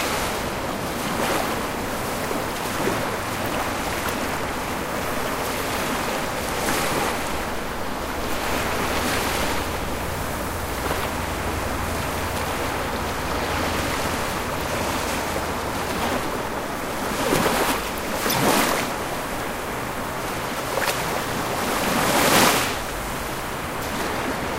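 From 1.81 s to 23.70 s a click recurs every 2.43 s, about ten in all. These are clock drift buffer slips, likely from two devices whose clocks differ by roughly 70 parts per million, forcing a few samples to be dropped or repeated. The strict regular spacing sets them apart from random decoding glitches.

At 18.28 s to 18.34 s a single short burst, peaking at about -10 dBFS, comes from a corrupt frame decoded. Damaged data, spanning what sounds like about two frames, sent energy to the wrong frequencies. It is isolated, unlike the periodic slip clicks.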